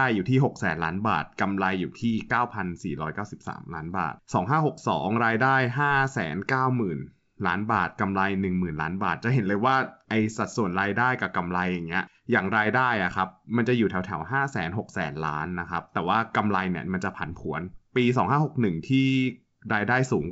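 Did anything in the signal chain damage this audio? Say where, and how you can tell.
No, nothing in the chain has hurt this speech; it's carried by G.722 wideband telephone coding at its full 64 kbit/s, which keeps the band up to about 7 kHz, and whatever mark the codec leaves is faint at most.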